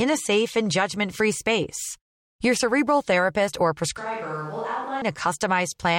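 A switch to a distant microphone occurs from 3.97 to 5.02 s, right after "cerebral therapist or": the speech abruptly turns hollow and roomy, with thinner bass, a level drop of about 10 dB, and room noise rising to about 25 dB below the speech, likely because the close microphone dropped out.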